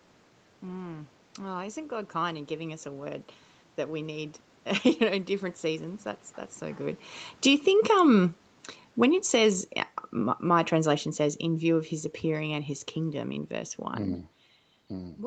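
From 7.31 to 7.66 s, after "that's so good", and again from 10.19 to 13.37 s, after "um when it says", automatic gain falling lowers the level by about 5 dB. Speech and room noise sink together, so the waveform envelope and the spectrogram's background darken as one.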